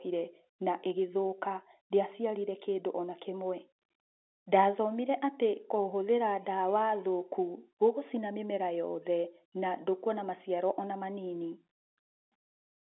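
The speech has no technical faults; it simply has the narrow, band-limited sound of an ordinary telephone line.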